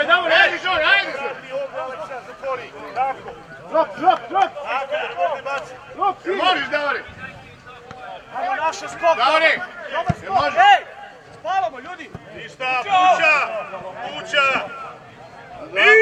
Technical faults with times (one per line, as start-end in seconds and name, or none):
none